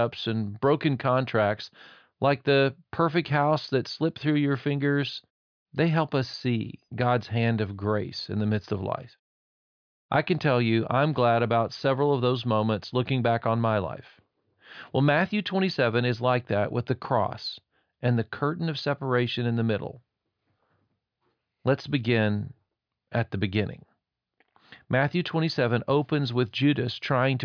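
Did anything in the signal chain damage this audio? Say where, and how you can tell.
No, nothing in the signal chain has audibly damaged this speech recording. No stage, from capture through to playback, leaves a mark that can be heard at any point in the clip.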